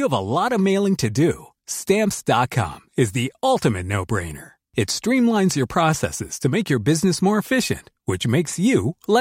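No faults turn up anywhere in the recording; nothing drops out, clips, glitches or distorts at any point.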